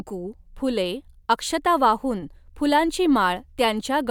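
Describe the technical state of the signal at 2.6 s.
At 2.6 s the speech signal is intact, with no audible fault at that moment.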